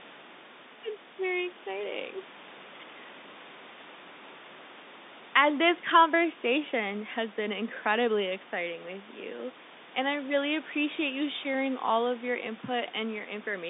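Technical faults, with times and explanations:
No technical faults are present: the speech arrives through a standard telephone channel limited to roughly 200 Hz to 3.7 kHz, with the room's own background noise sitting about 22 dB below it.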